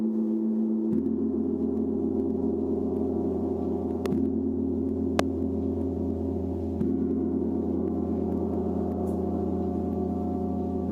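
A loud pop at 4.06 to 4.08 s, and a stronger one at 5.19 to 5.22 s, jump well above the sound, about 15 dB and 25 dB. Each is a single thump, likely a voltage spike, and unlike a dropout, the sound carries on beneath it.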